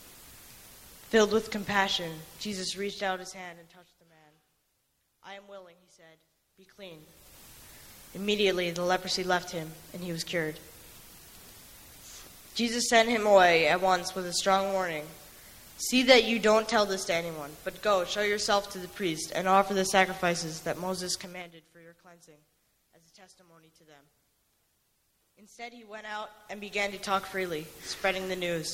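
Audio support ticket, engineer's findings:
Zipper noise, 2.56–4.10 s and 21.16–21.59 s. Ticking rides on level drops of roughly 25 dB and 20 dB. Gain stepped unsmoothed, 1 dB then 4 dB steps, around ten per second. Probable component: volume control lacking ramping.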